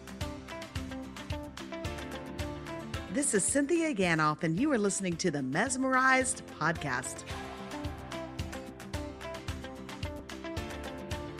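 At 10.19 s there is an overlap between stream segments: the time stamps of two consecutive pieces of the stream claimed the same stretch of time, and the player trimmed the duplicated portion even though that audio had not actually been repeated. About 13 ms of real sound is discarded, so the waveform jumps straight from one point to a later one. This is heard as a tiny skip forward in the sound.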